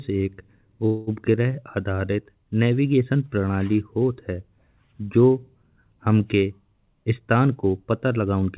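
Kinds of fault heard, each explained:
Call audio freeze: around 0.86 to 1.1 s the sound holds as a fading buzz for about 210 ms, likely delayed packets; spectrogram shows smeared, decaying harmonics.
Jitter buffer speed-up: from 6.51 to 8.43 s pitch-period slices are cut, playing about 9% faster at unchanged pitch; waveform shows whole cycles dropped, roughly a fifth of a second removed.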